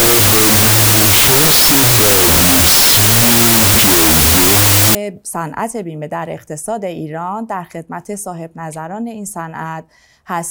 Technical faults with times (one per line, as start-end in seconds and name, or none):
0.00-4.95 wrong sample width